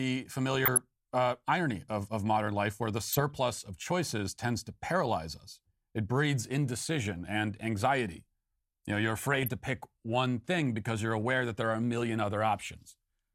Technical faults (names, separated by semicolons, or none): DAB burbling